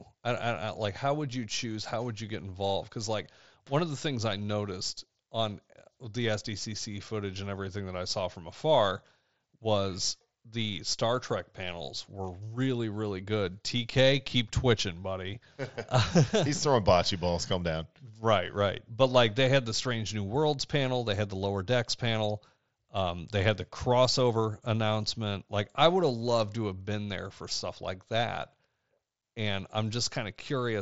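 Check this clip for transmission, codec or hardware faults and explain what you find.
No faults found here.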